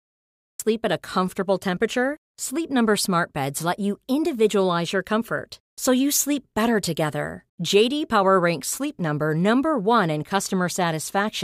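From 0 to 0.60 s there is digital silence, then speech enters abruptly mid-sound before "at a comfortable temperature": a cut-off start, where capture began late with no natural attack.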